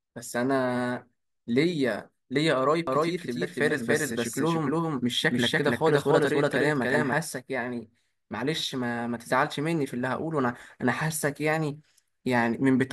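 It's a speech recording, and from 2.87 to 7.13 s there's a doubled audio track: a second, equally loud copy trails roughly 300 ms behind, dry and full-band, cutting in and out abruptly. That's likely a slower capture path or misaligned edit.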